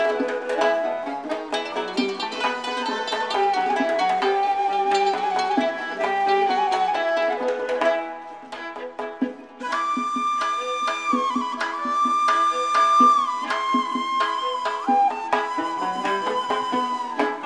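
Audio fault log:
No fault is logged for this audio.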